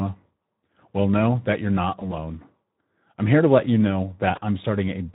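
From start to finish the speech sounds hoarse and grainy. These are the plainly audible artefacts of the Speex codec, whose CELP coding here has too few bits to describe the excitation properly. The degree of damage fits a setting of around 11 kbps.

From 1.99 to 2.13 s, right after "know that you're not", and again from 4.35 to 4.41 s, after "to let you know", the voice smears into a brief stretched, fading sound before recovering. This is VoIP packet loss concealed by the speech codec. The decoder stretched its last pitch and filter over what sounds like a single missing 20 ms packet, and its frame-to-frame memory kept the sound distorted a little beyond the gap.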